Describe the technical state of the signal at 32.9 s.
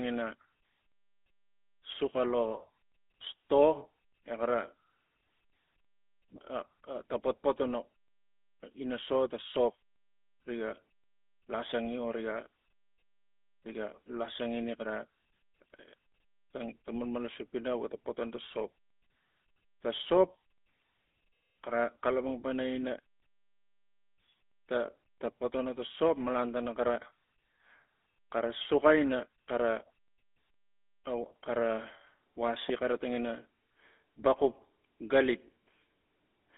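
At 32.9 s the speech carries GSM full-rate codec damage, present throughout. Pulse-driven excitation within a 250 Hz to 3.5 kHz band, fitting 13 kbps, sounds plainly buzzy and gravelly.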